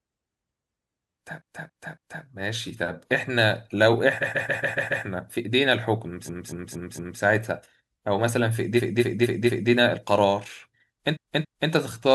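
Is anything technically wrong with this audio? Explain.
Yes, there are repeated frames: blocks of compressed frames were played several times over, so short stretches of speech stutter and loop. This happens at 1.37–2.21 s (a 279 ms block heard three extra times), 4.21–5.04 s (139 ms, six extra), 6.25–7.18 s and 8.76–9.69 s (232 ms, four extra each), and 11.12–11.68 s (279 ms, two extra). Each stretch runs longer by the repeated time, up to about 0.9 s.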